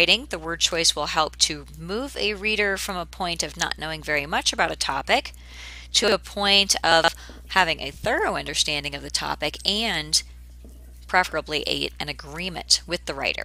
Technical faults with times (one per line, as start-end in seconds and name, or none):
6.04-6.12 chunks out of order
6.92-7.08 chunks out of order